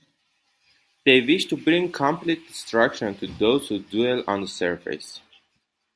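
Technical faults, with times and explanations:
Nothing stood out on listening to this speech recording.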